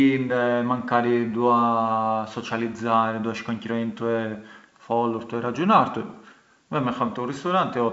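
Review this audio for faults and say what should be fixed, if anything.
Bit errors on an ADPCM link, 6.10 to 6.16 s: a short rough burst with pops and a brief level jump. Flipped bits, at a low rate of a fraction of a percent, also throw off the decoder's step size and predictor, so the damage rings on rather than staying a single click. Adding error detection with concealment on the link, or moving the call to a cleaner channel, would prevent it.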